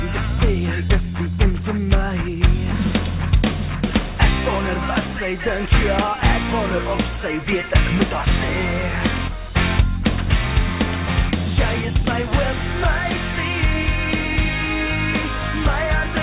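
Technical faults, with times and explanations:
No technical faults heard.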